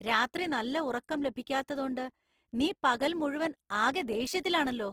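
Throughout, the speech sounds grainy and noisily rough rather than swirly, since bands are filled instead of left empty. This is likely Opus compression in CELT mode, consistent with about 16 kbps.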